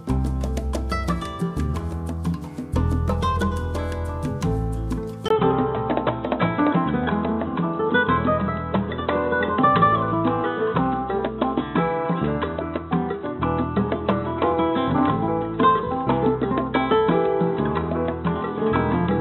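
At 5.28 s the sound drops out for about 20 ms, then returns duller and boxier, with nothing above 3.9 kHz and faint new background noise, at roughly the same level, until the end. The likely cause is the input switching to a poorer device.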